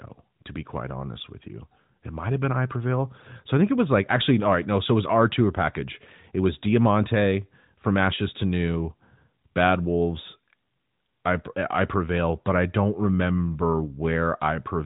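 No faults in this speech.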